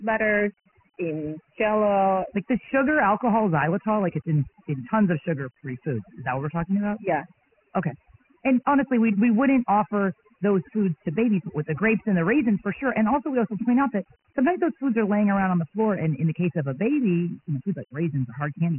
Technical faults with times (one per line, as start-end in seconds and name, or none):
0.00-18.79 overdone noise removal
0.00-18.79 Dialogic VOX ADPCM